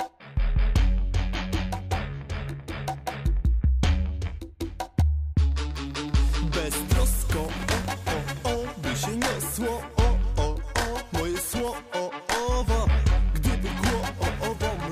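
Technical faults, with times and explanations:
7.32 to 7.92 s and 11.34 to 11.68 s, processor overload crackle. Gritty tearing rides on the sound, then stops. The processor missed many tiny buffer deadlines in a row. Each miss replayed a scrap of old audio with hard edges, which fits buffers of around a millisecond and a half.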